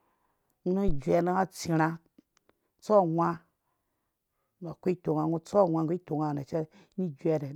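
At 0.88 s a phantom power thump lands and fades by 1.02 s: supply voltage switched on or off on the live input, its step pushed through the coupling capacitors. Peaking around -16 dBFS and decaying within 31 ms, it is a deep low thud, unlike a sharp click or breath pop.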